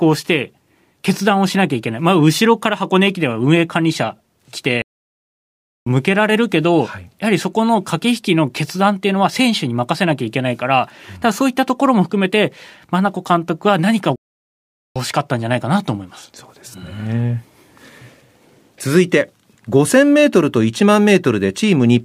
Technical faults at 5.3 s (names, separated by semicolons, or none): playback stall